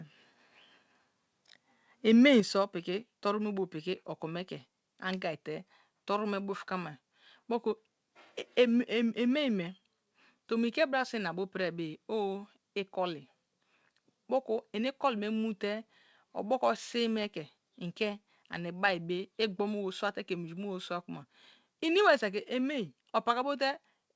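At 2.4 s, the speech and the background both drop by about 6 dB in one sudden step, and stay there. This is most likely a microphone volume stepped down by the call software, which lowered the input gain at once. The call path's audio stops at about 8 kHz throughout.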